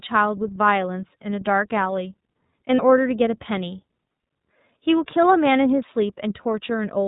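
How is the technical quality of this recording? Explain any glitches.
Technical quality is limited by plainly audible narrowband coding throughout, plus one brief dropout.

The iLBC codec damage runs the whole recording: nothing passes above 4 kHz, and the speech sounds slightly rough and synthetic. A spectrogram shows a flat ceiling at 4 kHz, and the sound fits roughly 13.3 kbps coding in 30 ms frames.

Lost iLBC frames occur from 2.76 to 2.83 s, consistent with one missing 30 ms frame. The decoder repeats the last pitch cycle with added noise, producing a held, buzzy vowel. The waveform shows near-identical repeating periods, and the spectrogram shows static, smeared harmonics.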